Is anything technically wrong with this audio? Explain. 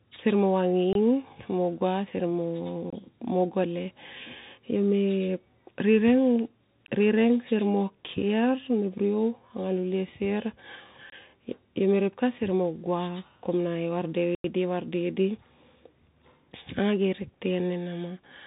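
Yes. The speech is narrow and muffled throughout, with scratchy s sounds and a grainy hiss underneath. This is Bluetooth CVSD headset codec damage. The codec sends one up-or-down bit per sample and adapts its step size, so fast, loud high sounds outrun it and distort. Nothing above 3.8 kHz survives.

Short holes occur at 0.93, 2.90 and 11.10 s, each about 23 ms long, and a longer hole runs from 14.35 to 14.44 s, about 93 ms. Each is a block of digital silence: likely the output buffer was not filled in time. The lengths fit 1024- and 4096-sample buffers.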